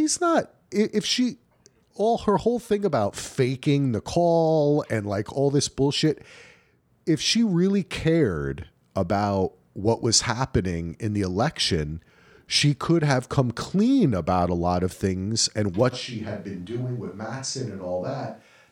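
A speech recording that, from 15.94 s to the end, abruptly turns roomy and hollow, with thinner low end, a level drop of roughly 10 dB, and audible room noise sitting around 40 dB below the speech. That sudden change in character, with no return before the clip ends, likely comes from a switch to a distant microphone: the close mic's signal dropped out and a farther pickup, such as a camera mic, carried the remainder.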